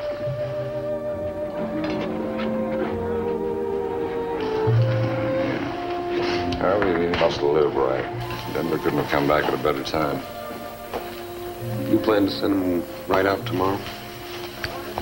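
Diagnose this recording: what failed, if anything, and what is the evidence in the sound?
Pre-emphasis left on from 8.21 s onward: the 75 µs FM treble lift, about 14 dB at 10 kHz, was never undone at playback, so the sound turns thin and sibilant.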